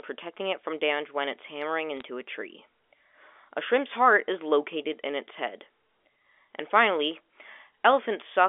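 A short bit of telephone-band speech, and there's one clear fault: bit errors on a digital phone line, heard as a small burst of sharp ticks and crackle from about 1.97 to 2.02 s, right after "damage when it's hammering" and just before "a tree". Each flipped bit in the G.711 A-law stream corrupts a single sample, and hits on the sign or upper bits jump that sample far off, so you get clicks sitting on top of speech that's still intact. The error rate works out to roughly one or two bits in a thousand, concentrated in what sounds like a couple of frames. The 300 Hz to 3.5 kHz line band itself comes through as you'd expect from a 64 kbps phone line.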